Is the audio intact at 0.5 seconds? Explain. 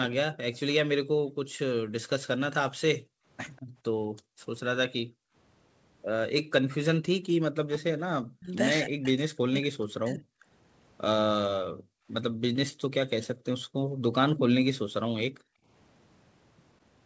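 No. From 0.05 to 0.59 s there is an echo leak, likely from a far-end loudspeaker whose echo canceller failed to fully remove what its microphone picked up, so that leftover was sent back down the line. The result is a faint, delayed copy of the speech trailing it by about 194 ms, sitting well below the direct speech, roughly 15 dB down, and it is still present at 0.5 s.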